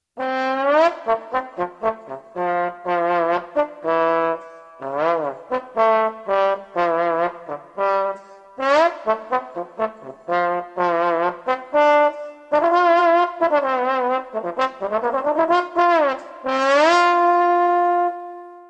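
No technical faults can be heard anywhere in this recording.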